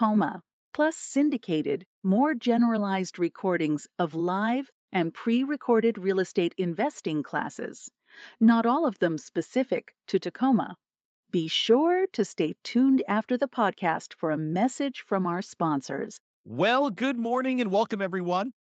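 Nothing stood out on listening to this speech recording, whose top end stops near 8 kHz, as a call link leaves it.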